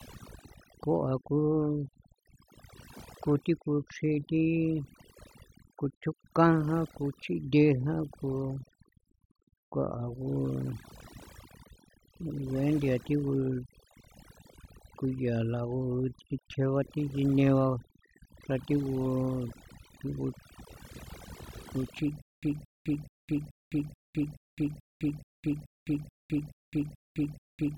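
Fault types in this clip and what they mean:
Overdone noise removal: A noise reducer set far too aggressively runs through the whole speech clip. Frequency bands sitting near its noise estimate are pulled down or switched off, so the background collapses to near silence sprinkled with twinkling specks, and the quieter parts of the voice are stripped too. Unlike codec artefacts, the damage tracks the noise floor and is most exposed in the pauses, not just during busy passages.
Stutter with silent gaps: From 22.22 s to the end, playback likely stalled and retried repeatedly. The same 222 ms fragment of speech plays, then about 208 ms of dead digital silence follows, repeating every 430 ms, 13 times in all. Whatever speech belonged in that stretch never arrives. The exact repeat of identical material at a steady pace, with true silence between, separates it from random dropouts or a plain loop that runs without gaps.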